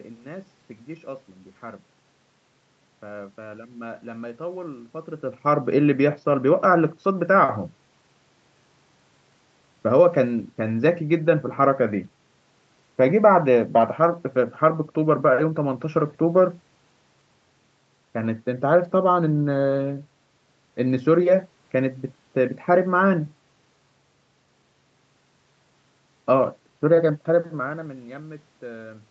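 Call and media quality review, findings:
No faults found in the speech. Audio tops out at 8 kHz, consistent with the Opus call path and call microphone processing, with room noise and level shifts around 5 s and again near the end as the talker moves.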